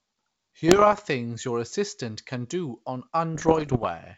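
Flipped bits on the ADPCM link, the G.722 path carrying this wideband speech, cause two bursts of damage. Each wrong bit also knocks the decoder's step size and predictor off track, so the error rings on for milliseconds. From 0.68 to 1.08 s, at an error rate somewhat under one percent, this gives pops and rough crackle with brief level jumps. From 3.35 to 3.87 s, at roughly twice that rate, the bursts are denser.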